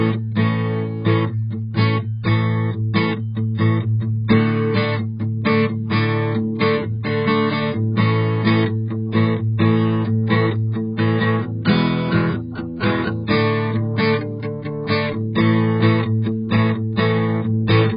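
Throughout, the music sounds dull and smeared, with nothing above 5 kHz and a warbling texture. This is heavy AAC compression, likely at a very low bitrate around 12 kbps. From 10.27 to 10.29 s and again at 12.53 s, a brief hiss runs ahead of an attack. This is pre-echo, where codec noise spreads into the quiet moment before the hit.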